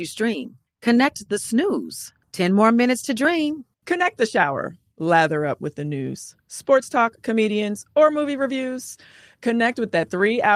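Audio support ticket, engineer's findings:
No audio faults found in this speech clip; nothing to report for this ticket.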